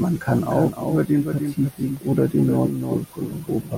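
Speech, and the whole way through it's got a doubled audio track: a second full-band copy trails the original by roughly 0.3 s, only about 5 dB down, with no room colour or decay on it. It's likely a second capture path or an edit holding two copies out of step. There's also a block of digital silence at 1.97 s, under a millisecond long. The sound drops out and snaps back with no fade, so you hear it as a tick or dip, the kind of gap you get when the output buffer isn't filled in time.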